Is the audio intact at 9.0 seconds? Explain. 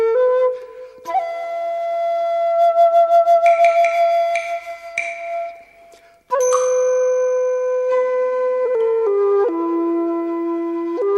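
Yes, at 9.0 seconds the audio plays through cleanly, with no dropout, click, distortion or other fault at that moment.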